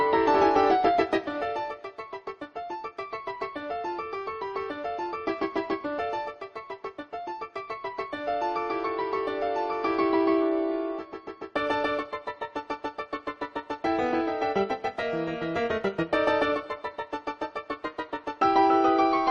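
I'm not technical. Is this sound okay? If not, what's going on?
Yes, no faults to report.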